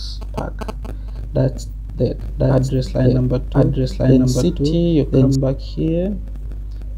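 A doubled audio track runs from 2.21 to 5.35 s: a second copy of the sound, at about the same level, trails the original by roughly a second, with no decay or room colour. It likely comes from the signal being captured twice through a slower path, and the copy starts and stops abruptly.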